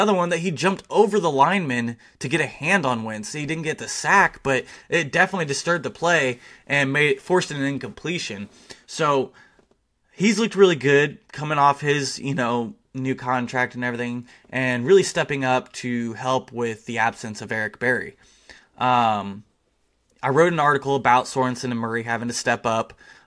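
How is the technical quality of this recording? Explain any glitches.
The technical quality of the recording is good, and there are no glitches to explain.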